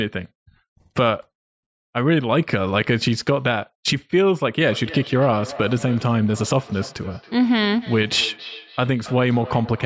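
Speech. From 4.65 s to the end, phrases come back roughly every third of a second, thin and ringing, at about 18 dB below the voice. This is feedback echo between two devices sharing a room.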